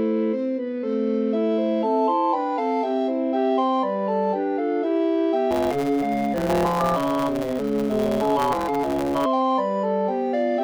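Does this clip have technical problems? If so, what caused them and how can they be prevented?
Yes. From 5.50 to 9.26 s there is a block size mismatch (truncated): a 138 Hz buzz while the audio runs 1.6 times fast at about normal pitch. Unlike a sample-rate error, the timbre stays; the block tails are simply discarded, consistent with 512-sample writes. Matching buffer sizes between writer and reader prevents it.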